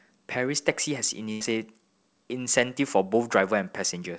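At 1.32 s the speech breaks up in a burst of packet loss lasting to about 1.42 s. The receiver had nothing to play, so it stretched the last sound it had for roughly 85 ms, letting it fade as a held buzz or hiss, and then rejoined the speech about 80 ms further on. Unlike a plain dropout to silence or a clean edit, the gap is filled with decaying repeated sound, and the skipped stretch is lost. Throughout, nothing above 8 kHz comes through, which fits a wideband call codec such as G.722.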